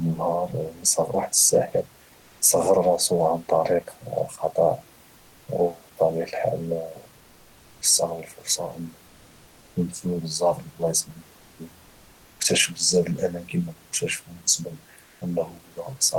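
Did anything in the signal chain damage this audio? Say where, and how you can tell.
Yes: comfort noise in place of the background, from the codec, at 9.07–9.73 s and after "كتاشفهم بسبب" at 15.07–15.19 s. The spectrogram's background texture turns smooth and featureless at the same level, likely because DTX paused transmission.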